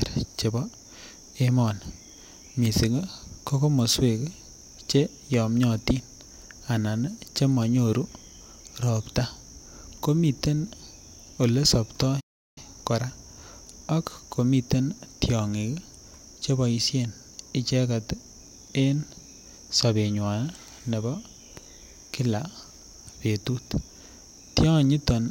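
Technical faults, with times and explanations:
12.20–12.58 s, playback stall: the speech cuts out mid-flow into about 0.36 s of dead silence, then carries on. This likely comes from the player running short of data or its output thread being briefly blocked.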